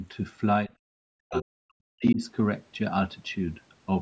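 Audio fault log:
0.68–1.61 s and 1.95–2.20 s, speech suppressed in double talk: The echo canceller likely could not tell the talker from loudspeaker echo while both sides spoke, so it pulled everything down. The voice sinks by about 40 dB in places, for roughly 0.7 s in the first stretch and a brief moment in the second.
1.34–1.42 s, other side's voice leaking through: The echo canceller likely left part of the loudspeaker signal in the microphone feed, so a short scrap of a second voice surfaces inside the first suppressed stretch, only slightly quieter than the talker, at about 5 dB below.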